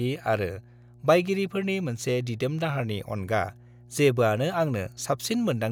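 Mains hum at 60 Hz runs under the speech throughout, roughly 25 dB below it. Power-line coupling draws a steady horizontal line at 60 Hz on a spectrogram.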